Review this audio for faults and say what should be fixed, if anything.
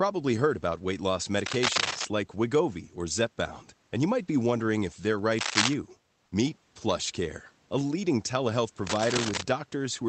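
Cable scratch noise occurs at 1.46–2.05 s, 5.39–5.74 s and 8.87–9.45 s. These are dense, uneven crackles near speech level, loudest in the middle burst, likely from a worn connector whose contact resistance jumps as it moves. A spectrogram shows ragged broadband smears, and the waveform shows spiky clusters. Replace or reseat the worn cable and connectors, and keep them still during recording.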